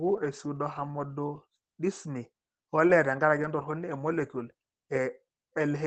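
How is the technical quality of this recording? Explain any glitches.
The speech comes through a call codec, with its audio band topping out around 8 kHz, and has a brief cluster of glitches between about 2.87 and 3.62 s.

At 2.87 to 2.92 s a sound is held slightly too long, with a faint buzzy smear. This is a short stall from a late packet: the jitter buffer ran dry, so the receiver stretched the last sound by about 17 ms until the data arrived. Nothing was skipped, and playback ran 17 ms later from then on.

At 2.89 to 2.93 s, 3.42 to 3.46 s and 3.58 to 3.62 s the sound turns briefly rougher and noisier for 40 ms each time, with no gap. Each is a lost packet rebuilt from error correction: the following packet carried a low-bitrate copy, which the Opus decoder played instead.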